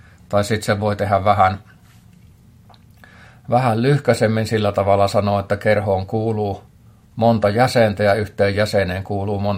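No technical faults occur at any point in the clip.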